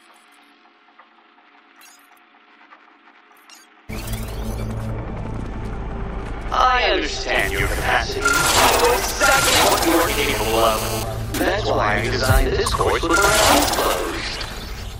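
From 10.07 to 11.03 s a GSM phone buzz sits about 8 dB below the sound: a nearby 2G handset on a call pulses its transmitter 217 times a second, and the audio circuit rectifies those bursts. It's a hard, steady rasp. A spectrogram shows a comb of stacked lines at 217 Hz and its harmonics, and the waveform shows a regular pulse train.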